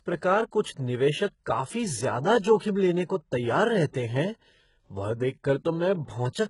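Speech runs through heavy HE-AAC compression for the whole clip, likely at a very low bitrate around 12 kbps. The treble sounds synthetic, with gritty, lispy s sounds. A spectrogram shows a hard ceiling at 11.1 kHz and blocky, repeated-looking upper bands above the crossover.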